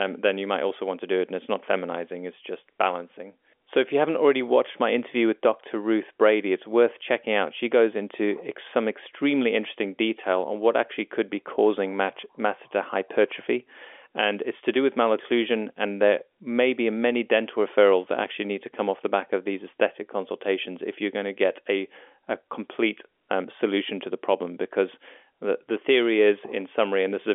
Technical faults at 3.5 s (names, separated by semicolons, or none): none